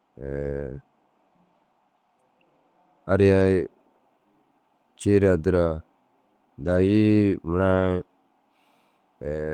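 At 0.61 s, 3.39–3.41 s, 6.65–6.75 s and 7.71–7.81 s, lost packets were rebuilt from error correction. Low-bitrate redundant copies fill these spans without a gap, but the speech briefly turns rougher and noisier.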